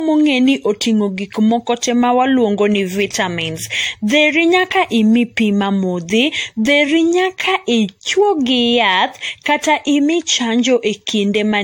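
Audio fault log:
throughout, generation loss: the speech carries a swirly, hollow coloration and smeared consonant attacks that are heavier than a single pass at this quality would leave, which points to likely repeated decoding and re-encoding through an AAC-LC chain at around 64 kbit/s, roughly five times over. Each new pass quantises on a shifted frame grid, so noise and spectral gaps accumulate. Nothing is audible above 16.6 kHz.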